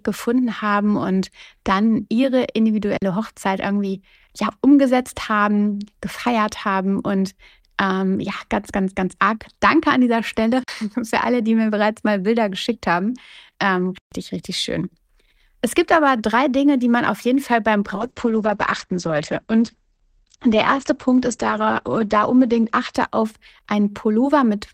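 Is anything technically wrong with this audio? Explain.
Yes, the speech has two faults. There are underruns with held sample at 2.97 s after "haben und dann ihre", at 10.64 s before "für alle die mir" (each 0.05 s, fitting a 2048-sample buffer), and at 13.98 s before "richtig schön" (0.14 s). The starved buffer freezes the last value, so the waveform shows flat plateaus. About 50 ms or 150 ms of live audio went missing each time. From 17.96 to 24.55 s, a call bitrate drop cuts coding from 64 to 10 kbps, lowest for 4.28 s. The speech turns rough and muffled, and the spectrogram loses everything above 8 kHz.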